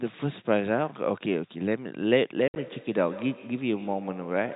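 From 2.36 s to the end there's feedback echo between two devices: a second device in the room is replaying the call into the first microphone, so each syllable comes back roughly every 150 ms, thin and ringing, peaking about 15 dB under the speech.

Between 2.48 and 2.56 s there's packet loss filled with silence: about 70 ms of audio drops out across that 80 ms, the longest hole 60 ms, with hard edges. The gap sizes fit 10 ms packets, all carried over the band-limited G.711 phone line.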